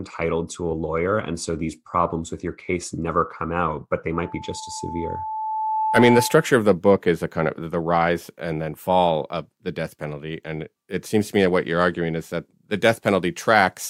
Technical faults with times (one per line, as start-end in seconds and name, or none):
4.14-6.58 loudspeaker feedback squeal